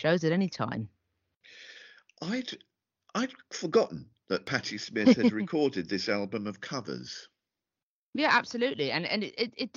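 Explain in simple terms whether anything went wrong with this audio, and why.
Dropped samples, at 4.47 s just after "I'd forgotten that" and again at 6.81 s just after "recorded this album of", each heard as a single sharp click. A tiny sliver of the recording, a fraction of a millisecond, was likely skipped, so the sound jumps straight from one point to a later one. That sudden step makes the click. Far too little is missing to lose any of the speech itself.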